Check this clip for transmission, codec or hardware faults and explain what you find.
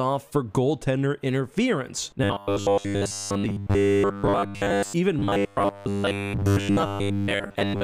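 A robotic sound from repeated short buffers occurs from 2.24 to 4.94 s and from 5.19 s to the end: a rigid, metallic 100 Hz buzz, near-constant at first, then covering most of the second stretch. The likely cause is late-arriving audio, with roughly 10 ms segments looped to fill the gaps.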